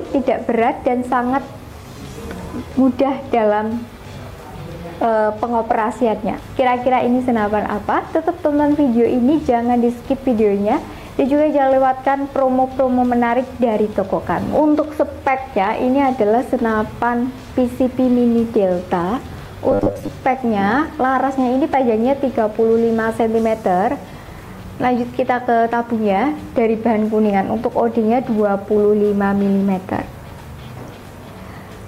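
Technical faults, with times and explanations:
19.71–20.10 s, robotic sound from repeated short buffers: a rigid, metallic 100 Hz buzz, likely from a 10 ms chunk repeated over about half the passage while fresh audio arrived late.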